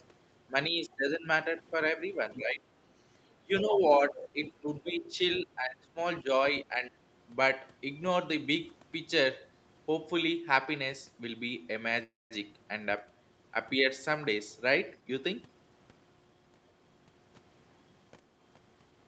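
Speech over a call link, with the other side's voice leaking through at 2.34–2.42 s, 3.59–3.80 s and 4.45–5.43 s, roughly 10 to 15 dB below the talker. It is likely loudspeaker echo the canceller failed to remove, and shows as faint, separate harmonic traces under the main speech. The talker's speech is also suppressed in double talk at 2.37–2.62 s, 3.41–6.30 s and 6.64–6.91 s. The waveform envelope dips by up to about 15 dB, likely because the canceller pulled both voices down together. A call audio freeze at 12.03–12.33 s fills 273 ms, nothing is lost, and about 200 ms of it is silence. It is likely a jitter buffer running dry while packets were delayed, and it looks like a short smeared tail followed by a blank gap before the speech resumes. A jitter buffer speed-up at 14.95–16.51 s plays the speech at 118% with no pitch change, cutting out about 0.3 s in small pitch-period pieces. It sounds hurried, and syllables look compressed in time. 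The whole clip sits under the 8 kHz ceiling of the Opus call path.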